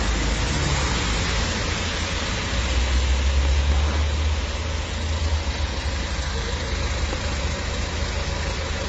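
Everyday sound with nothing above 8.2 kHz throughout, where a spectrogram shows a flat ceiling and mixed smeary, warbling artefacts, likely transcoding between lossy codecs, consistent with low-rate HE-AAC re-encoded as MP3.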